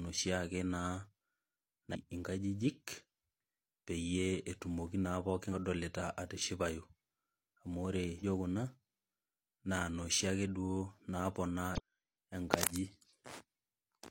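Damaged data in a compressed stream at 1.91–1.96, 5.48–5.54, 8.18–8.24 and 11.75–11.80 s: corrupted frames throw the decoder out of sync, leaving brief chirps, squawks, clicks or short holes of about 50 ms.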